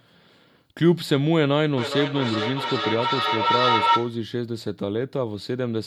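A speech clip with feedback howl from 1.77 s to 4.3 s. A tone near 1 kHz builds up and swells to about 2 dB above the speech. It pulses roughly every 0.4 s. That pulse is the loop's delay. Two devices in one room are on the same call. Sound leaves one loudspeaker, reaches the other microphone, and returns louder each trip. The repeats grow instead of dying away. They narrow to the frequency the loop favours.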